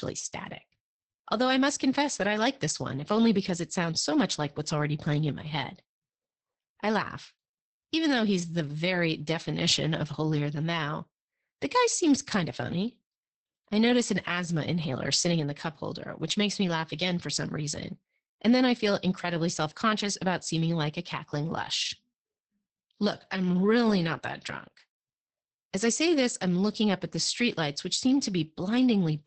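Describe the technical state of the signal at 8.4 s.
At 8.4 s the speech carries Opus voice compression, present through the whole clip: a 10 kbps SILK linear-prediction coder in wideband mode, leaving nothing above 8.6 kHz. Coarse excitation coding makes it hoarse and faintly robotic. A simple low-pass filter would muffle without that buzzy roughness.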